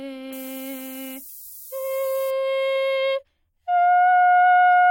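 From 0.33 to 2.30 s the music carries a steady, thin hiss that climbs toward the treble, only about 15 dB below the music. This is low bit depth with noise shaping: roughly 6-bit resolution, with rounding error pushed upward in frequency. At 2.75 s the audio jumps forward by about 40 ms. This points to compressed frames skipped, which fits two missing 21.3 ms frames.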